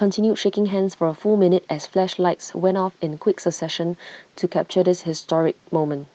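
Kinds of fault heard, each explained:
No faults can be heard in this speech clip. It has gone through a call codec and jitter buffer, and the high frequencies stop at about 8 kHz, as that path's bandwidth setting would give.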